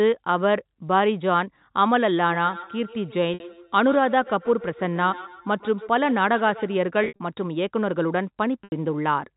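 Speech heard over a telephone-band path, with nothing above 4 kHz, as G.711 coding gives. From 2.29 s to 6.78 s each stretch of speech returns as a thin, ringing repeat roughly every 150 ms, peaking about 16 dB below the direct speech. That is feedback echo between two devices: a second device in the room plays the call back into a microphone, and neither echo canceller removes sound its own device didn't play. There are three short packet loss gaps with pitch repetition. The first is 60 ms at 3.34 s. The second is 120 ms of losses scattered over 7.04–7.19 s, the longest run 60 ms. The third is 80 ms at 8.64 s. In each, the receiver bridged the missing packets by repeating the last pitch period, fading it down before the speech cross-faded back in.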